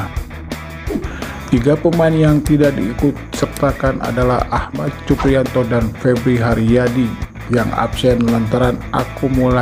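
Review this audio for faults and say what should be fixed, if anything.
One stereo channel likely drops out, from 4.65 to 4.87 s and 7.25 to 7.35 s; in the mono sum the sound dips abruptly by about 6 dB. Secure and check both channels' connections and routing to prevent it.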